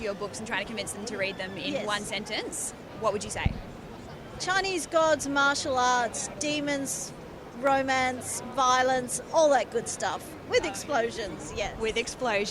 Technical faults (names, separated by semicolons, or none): clock drift buffer slips